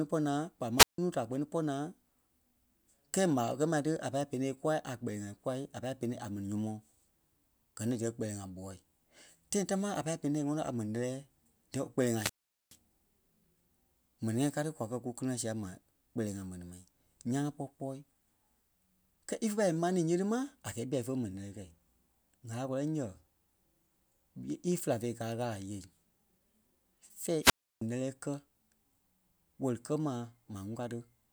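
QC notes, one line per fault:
0.77–0.98 s, 12.11–12.78 s and 27.41–27.82 s: wireless microphone squelch dropout. Each time the FM link fades, hiss swells, then the receiver's squelch shuts the output for about 155 ms, 419 ms and 317 ms respectively before speech returns, the first time on "nuu da kpɛ́ni pɔ́". On a waveform each shows as a flat near-zero gap. On a spectrogram, a broadband noise smear precedes an empty band-wide hole with abrupt edges.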